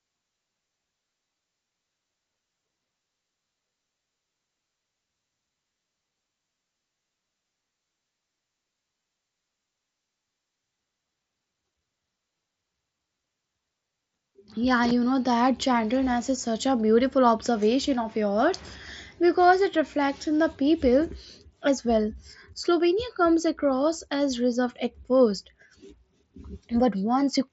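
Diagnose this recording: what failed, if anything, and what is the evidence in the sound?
Nothing here actually failed: the speech arrives over an ordinary wideband mSBC Bluetooth headset link, and the top end stopping around 7.7 kHz is just how that path works, not a sign of trouble.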